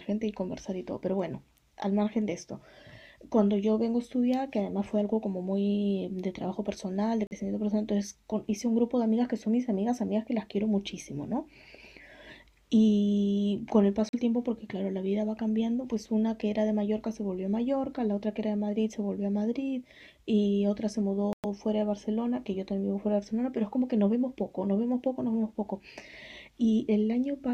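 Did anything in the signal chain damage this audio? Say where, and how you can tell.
Yes: playback-link silences at 7.27, 14.09 and 21.33 s (40, 42 and 108 ms) show as blank vertical gaps, likely a Bluetooth stall draining the headphone buffer.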